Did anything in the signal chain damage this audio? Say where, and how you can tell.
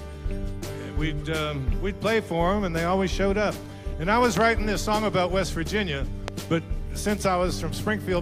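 Yes: loud pops, a double at 4.37–4.43 s and a single at 6.28–6.30 s, about 15 dB above the signal. The sound carries on beneath them, unlike a dropout. This is likely an analogue wiring or switch voltage step.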